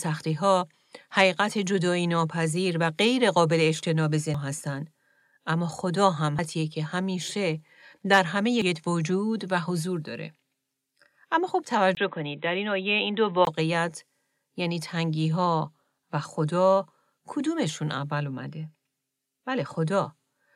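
At 4.34, 6.39 and 8.62 s there are brief glitches from damaged data in the compressed stream, where the decoder loses sync. From 11.95 to 13.47 s the sound goes dull, with nothing above 3.9 kHz and a 20 ms gap at the switch, likely from input switching to a poorer device.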